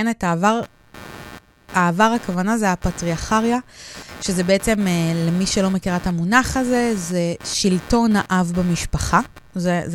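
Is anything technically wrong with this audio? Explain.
Yes. From 0.63 s to the end, a pulsing buzz repeating around 100 times per second sits roughly 20 dB below the speech. This is computer activity noise: processor, graphics card or mouse load shifts the audio circuit's shared ground, so the interference follows the machine rather than the speech.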